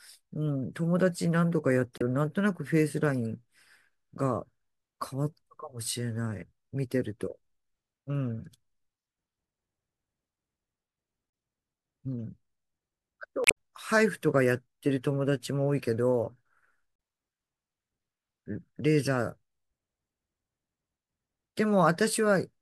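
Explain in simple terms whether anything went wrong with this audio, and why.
Damaged data in a compressed stream shows up from 1.98 to 2.02 s and from 13.44 to 13.56 s. Part of the compressed file was corrupted there, so the decoder misread those frames and lost its place, producing a brief chirp or blip in the speech.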